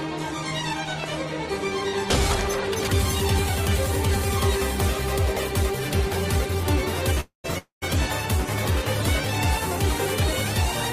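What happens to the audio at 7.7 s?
At 7.7 s the sound hits a call audio freeze, lasting from 7.58 to 7.84 s. Packets were likely held up in transit until the jitter buffer ran dry, so the receiver stretched the last sound into a fading buzz or hiss for roughly the first half, then about 120 ms of silence. Playback resumes exactly where it stopped, losing nothing but arriving about 0.24 s late. On a spectrogram this shows as a smeared, decaying band followed by a blank column. On the waveform it appears as a shrinking repetitive pattern that becomes a flat line.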